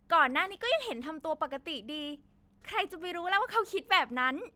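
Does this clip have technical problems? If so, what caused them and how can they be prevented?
No, nothing stood out on listening to this speech clip.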